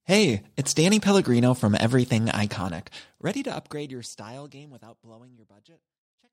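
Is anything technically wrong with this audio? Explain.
No, nothing is technically wrong; the smooth fade-out that begins around 2.5 s and runs to the end is a deliberate edit with no click or hard edge.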